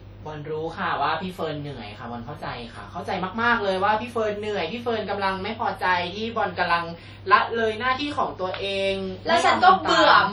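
From start to finish the speech carries heavy transform-codec damage, most likely WMA compression from an early encoder, at a rate that fits roughly 32 kbps. Long transform blocks smear quantisation noise over tens of milliseconds, so consonants ring and vowels turn washy, with a hiss that swells and fades alongside the voice. Unlike a low-pass or band-limiting fault, the top end still reaches about 20.1 kHz; the harm lies in the smearing, not in missing treble.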